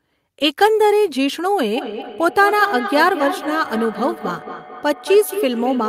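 A speech clip with feedback echo between two devices from 1.76 s to the end. The sound returns roughly every 200 ms, at most about 9 dB below the speech. Two nearby devices share the call. One microphone re-captures the other's playback, which its echo canceller cannot remove.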